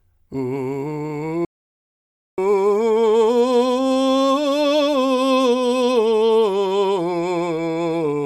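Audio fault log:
1.45–2.38 s, audio dropout to silence: the music cuts to silence for about 0.93 s with no room tone, unlike a fade or mute ramp; likely a lost input link.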